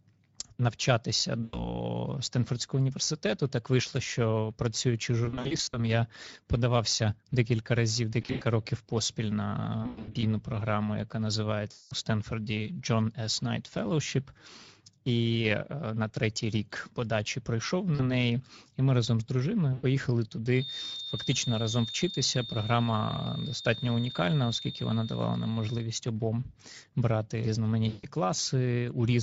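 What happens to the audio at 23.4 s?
A loudspeaker-to-microphone loop is likely sitting right at the edge of feedback, producing a feedback whistle from 20.48 s to 25.92 s, so 23.4 s falls inside it. The loop holds a single tone at about 3.6 kHz without running away, and it is heard as a thin, steady whistle behind the speech, roughly 15 dB below it, swelling and fading slowly in level rather than building.

Underneath that whistle, and across the whole clip, the speech has passed through the Speex codec at a bitrate of about 17 kbps. Too few bits remain to model the excitation faithfully, so the speech sounds noisy and hoarse, with plainly audible coding damage. Whatever sits above 4 kHz is only a shaped, noise-like fill rather than real detail.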